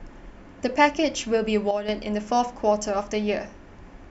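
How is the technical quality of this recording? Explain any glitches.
The recording has one level glitch. From 1.71 to 1.89 s there is a sudden gain jump. Speech and background noise drop together by about 8 dB, then return. The likely cause is a gain setting applied without a ramp.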